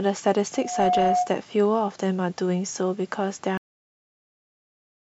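From 0.53 to 1.33 s a loudspeaker feedback squeal rings at 723 Hz, swelling over roughly a third of a second to sit somewhat above the speech. That swell from nothing, not a steady tone, marks a mic-to-speaker loop. At 3.58 s the audio has a cut-off end: it drops straight to digital silence mid-sound, with no decay, unlike a fade or noise gate.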